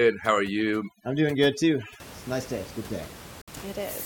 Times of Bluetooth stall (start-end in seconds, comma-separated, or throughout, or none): 3.42-3.48